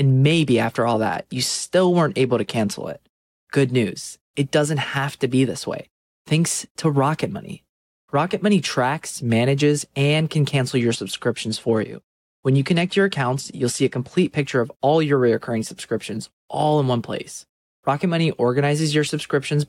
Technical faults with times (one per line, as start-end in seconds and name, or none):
0.32-2.79 Bluetooth SBC bit pool drop
10.81-14.39 Bluetooth SBC bit pool drop